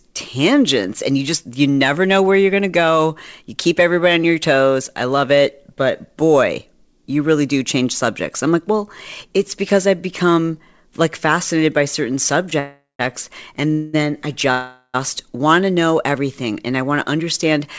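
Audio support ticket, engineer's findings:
Call audio freeze at 12.59–13.01 s, 13.71–13.95 s and 14.51–14.96 s. Last sound held as a fading buzz, then 150 ms and 60 ms of silence in the first and third. Likely jitter buffer ran dry on late packets. Nothing lost; speech resumes later. Spectrogram: smeared horizontal bands, then blank.

Jitter buffer speed-up, 17.12–17.60 s. Speech hurried to about 108% speed, pitch unchanged. Buffer trimming its excess delay by cutting pitch periods, about 50 ms in total. Waveform: whole cycles dropped, remaining cycles unchanged in length. Spectrogram: harmonics at the same height, syllables compressed in time.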